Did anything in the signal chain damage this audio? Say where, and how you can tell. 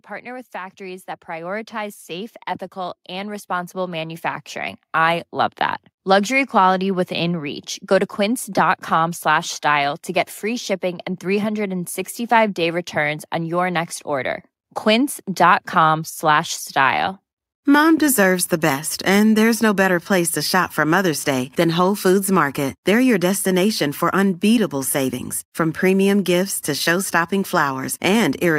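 Yes. From 0.23 to 7.57 s the speech and the background noise swell together by about 16 dB, which marks automatic gain rising in the call processing: the gain control judged the input too quiet and ramped its gain up. A talker moving closer would raise the speech but not the noise floor.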